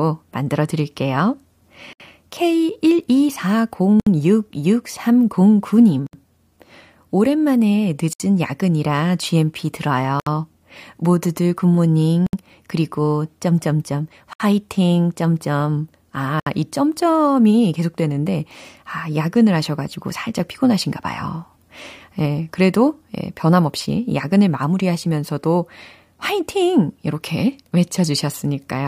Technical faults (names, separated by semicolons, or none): gap at a join of encoded pieces